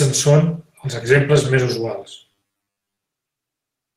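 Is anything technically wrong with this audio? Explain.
Yes, there are two problems in this speech clip.

From 0.42 to 2.17 s there's a call bitrate drop: Opus falls from 32 to 18 kbps for about 1.65 s, so the speech goes coarse and rough.

From 2.32 to 3.03 s there's a robotic sound, a stiff metallic 100 Hz buzz, likely from repeated short buffers of about 10 ms standing in for most of the real audio.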